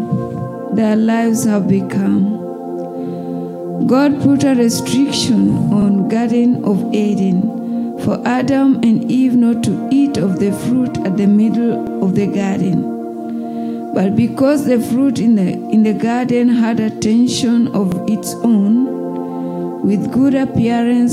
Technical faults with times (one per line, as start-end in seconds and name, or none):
5.82-5.87 overlapping chunks
11.87-11.92 overlapping chunks
17.92-17.97 overlapping chunks